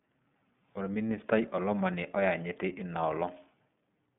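Throughout, the speech carries plainly audible iLBC codec damage: narrowband coding in independent 30 ms frames, which fits about 13.3 kbps, cuts everything above 3.7 kHz, leaving a rough, synthetic tone.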